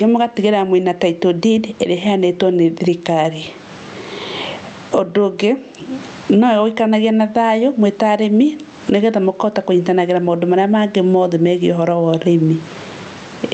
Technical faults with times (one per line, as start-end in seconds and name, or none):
0.00-13.54 gain pumping